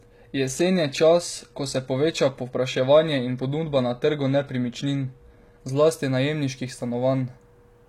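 From 0 to 6.0 s the speech plays through an adaptive stream starting at a low bitrate. The player began on a cheap version to start quickly. The treble is thin and partly synthetic, and codec artefacts are strong. This fits HE-AAC at around 20 kbit/s. At 6.0 s it switches to a better version, with no gap. The sound suddenly clears, with real treble reaching 14.9 kHz, consistent with AAC-LC at around 96 kbit/s.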